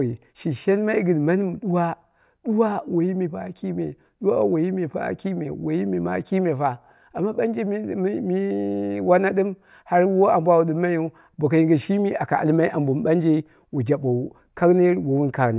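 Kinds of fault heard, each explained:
Listening to the speech closely, nothing stood out as a technical problem at any point.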